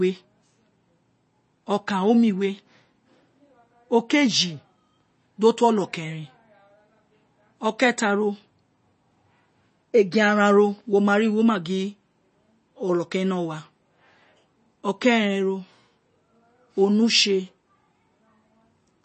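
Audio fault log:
Throughout, MP3 compression. The speech has a watery, swirling quality, and nothing reaches above about 8.3 kHz. This points to a low bitrate, likely near 32 kbps. With so few bits, the encoder cuts the treble at a fixed point. It also drops weak frequency lines. Those lines flicker on and off between frames, which gives the swirl. S sounds turn metallic and chirpy. Consonant onsets lose their sharpness and smear.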